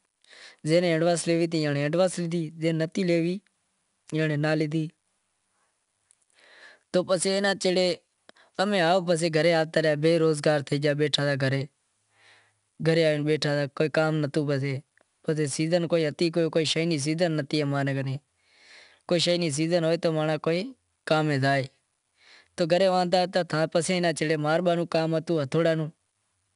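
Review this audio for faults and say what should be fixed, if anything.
A gritty hiss rides on every loud syllable for the whole clip, with roughness on sharp consonant attacks, and the sound is dull with nothing above 10.6 kHz. That is 4-bit ADPCM compression: each sample is coded as a coarse 4-bit step from a prediction, which fits a rate of about 88 kbps at roughly 22 kHz sampling. Keep a linear PCM or higher-rate source and avoid ADPCM encoding in the chain.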